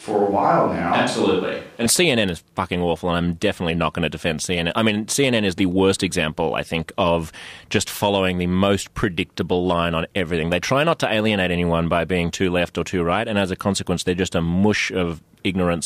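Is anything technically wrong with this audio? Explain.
Yes. From the start to 1.86 s the speech sounds roomy and hollow, with thinner bass and background noise well below the speech, then abruptly turns close and full. The cause is likely a switch to a distant microphone: the close microphone was missing, so a farther one picked up more room. Unlike added reverb or a filter, the change is sudden and the level stays about the same.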